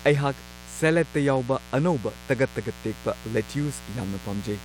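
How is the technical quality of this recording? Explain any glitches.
The recording has one clear fault: mains buzz runs under the speech from start to finish. It sits roughly 20 dB below the speech. The hum is locked to 60 Hz mains. Sharp switching spikes get into the signal twice per cycle. That spiky pattern carries a dense ladder of harmonics. They climb from 60 Hz into the kilohertz range. The result is a constant, raspy, gritty buzz rather than a smooth hum.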